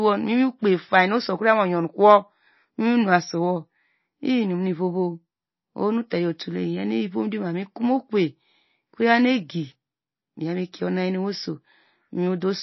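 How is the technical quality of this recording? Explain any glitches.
Quality is poor, with plainly audible codec damage across the whole speech clip. Throughout, nothing remains above 5.8 kHz and the sound turns watery; likely MP3 compression at a very low bitrate, cutting the treble and switching weak frequency components on and off.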